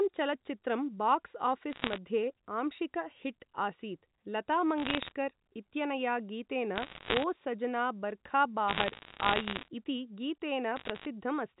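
Bit errors on a digital phone line occur in bursts at 1.73–1.98 s just after "चलच्चित्रं बाक्स्", at 4.78–5.12 s just before "इत्यनया गीतेन", at 6.76–7.24 s right after it, and at 8.68–9.68 s and 10.76–11.05 s. Each flipped bit in the G.711 telephone stream corrupts one sample. Hits on high-order bits, or on the sign of a loud sample, produce sharp ticks. At roughly one bad bit in a hundred, these ticks pile into crackle laid over the speech.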